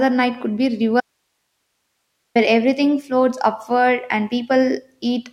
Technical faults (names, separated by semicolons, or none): audio dropout to a faint residue